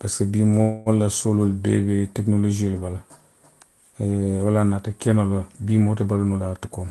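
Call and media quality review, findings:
Call audio freeze, 0.61–0.89 s: last sound held as a fading buzz or hiss for about 0.25 s before "la sooloolu bee be", nothing lost. Likely jitter buffer underrun from delayed packets; audio resumes late.

Jitter buffer speed-up, 6.30–6.84 s, after "moo te": speech about 17% faster, same pitch. Buffer over target; pitch periods trimmed, roughly 0.1 s removed.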